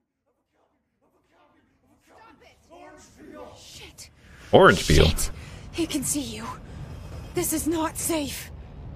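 No technical faults can be heard in the signal, which rises in a smooth fade-in from about the start and reaches full level by 5.3 s without any click or hard edge.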